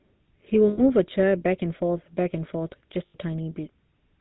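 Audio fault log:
Throughout: GSM full-rate codec, plainly audible buzzy, gravelly roughness and nothing above 4 kHz, consistent with about 13 kbps pulse-excited vocal-tract modelling of the speech.
0.68–0.81 s and 3.06–3.16 s: lost GSM frames, about 100 ms then 80 ms held as a rough metallic ring, previous frame parameters repeated.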